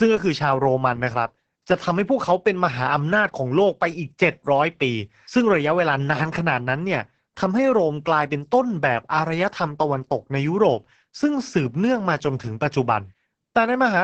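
Opus voice compression affects the speech from start to finish. Nothing survives above 8.5 kHz, so the top end sounds dull and muffled. The SILK coder's coarse excitation makes the speech hoarse and slightly robotic. This heavy damage fits a bitrate near 10 kbps.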